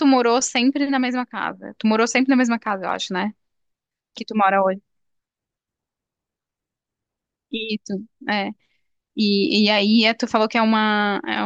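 No technical faults are audible.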